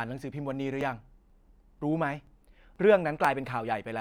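Speech with audio missing between chunks: tiny skips at 0.32, 0.81, 1.30, 2.27, 2.76 and 3.25 s, each losing around 15 ms. The sides butt together with no silence, unlike a dropout, and the regular half-second spacing is likely a chunked recording process.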